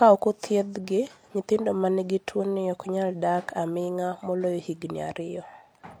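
At 2.37 to 2.39 s, between "othiedhgi nyithindo ma nigi" and "ok nyal dak aming'a", the speech is interrupted by damaged data in a compressed stream. Bytes in that part of the stream are corrupt, so the decoder misreads the affected frames, loses frame sync and scans forward for the next valid header before resuming. It sounds like a brief chirp, squawk, click or short hole lasting about 20 ms.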